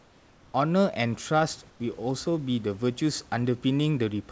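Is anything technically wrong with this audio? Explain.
Yes. From 0.0 to 0.54 s and again from 1.70 to 1.80 s, the quiet background turns into a flat, featureless hiss, about 3 dB and 5 dB quieter. This is likely comfort noise in place of the background: the sender paused transmission during silence and the receiver substituted shaped synthetic noise. The call path itself shows no content above 8 kHz.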